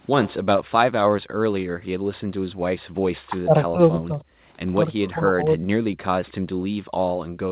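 Speech heard through a call path whose audio stops at 4 kHz, consistent with G.711 mu-law at 64 kbps, shows three kinds of echo-canceller trouble. Echo leak appears at 0.22–0.34 s and again at 6.27–6.31 s. A faint delayed copy of the voice trails by about 0.31 s, quieter still in the second instance. The likely cause is a loudspeaker at the far end whose echo canceller let part of the played-back signal through its microphone. Background gated by the echo canceller occurs at 1.22–2.09 s, 2.44–2.98 s and from 6.54 s to the end. The room sound drops by up to about 40 dB, for roughly half a second and a third of a second in the first two stretches, while the canceller clamps the microphone during loudspeaker playback. Speech suppressed in double talk affects 3.26–4.43 s and 4.98–5.67 s, where the voice dips deeply or breaks up for around a second and 0.7 s respectively. This is likely the canceller mistaking overlapping talk for echo and attenuating the genuine talker along with it.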